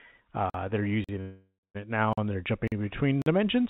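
At 0.50 s the speech drops out for 44 ms. The same gap between chunks returns at 1.04, 1.59, 2.13, 2.68 and 3.22 s. Each hole comes after half a second of audio. That regular spacing points to playback in 0.5-second chunks, with a short silence left at each join. Nothing is lost. The sound is just cut at every seam.

From 1.21 to 1.77 s comes a call audio freeze. The last sound is stretched into a fading buzz for about half a second, and about 190 ms of that is silent. Then the speech resumes where it stopped, with nothing missing. The likely cause is delayed packets emptying the jitter buffer. The chunk gap at 1.59 s falls inside this stall. The band-limited call sound, with nothing above 4 kHz, fits a 64 kbps G.711 mu-law path.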